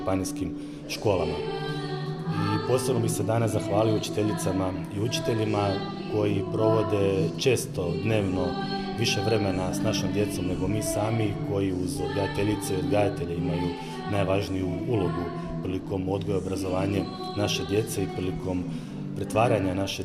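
No technical faults can be heard anywhere in this audio.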